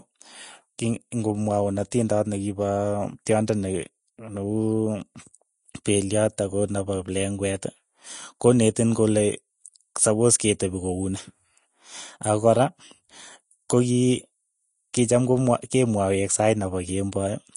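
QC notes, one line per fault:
Throughout: likely Vorbis compression. The speech sounds hissy and grainy, and nothing is heard above 10.6 kHz. The treble is coded so coarsely that its fine detail becomes noise of similar energy. Attacks blur. This fits a low bitrate, around 33 kbps.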